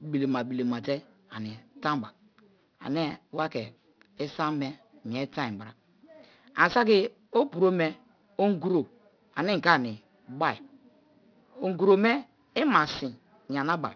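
Speech with aliasing throughout. Sibilants sound gritty and metallic, and energy runs hard up to about 5.5 kHz. This fits downsampling to an 11 kHz rate without a proper anti-alias filter. Content above that edge folds back, roughly 20 dB below the speech.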